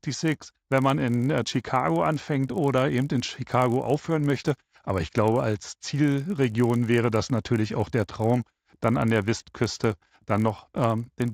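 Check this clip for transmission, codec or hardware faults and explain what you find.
One fault runs through the whole clip. A resampler restarted on every block is present from start to finish: the speech was converted in separate 20 ms chunks, likely from a 16 kHz to a 48 kHz rate, each with no knowledge of its neighbours. Each chunk edge is interpolated against missing or wrong samples, leaving a small discontinuity. At 50 Hz these errors fuse into a low, steady buzz riding under the speech, heard only while someone is talking.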